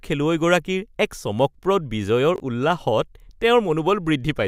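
Chunks out of order at 2.36–2.4 s, after "এক চমকপ্ৰদ": a 20 ms chunk plays one chunk late, jumbling the sound, shown as three abrupt waveform discontinuities and vertical spectrogram lines.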